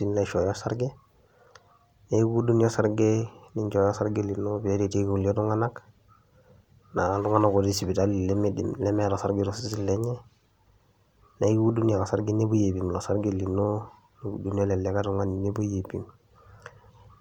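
No technical faults can be heard anywhere in this recording.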